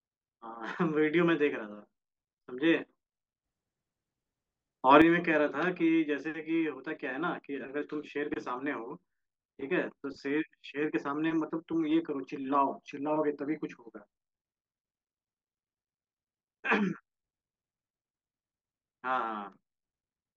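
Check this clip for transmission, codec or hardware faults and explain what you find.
One fault shows up. A sudden gain jump runs from 3.44 to 5.02 s: speech and background noise rise together by about 8 dB, likely from a gain setting applied instantly without a ramp.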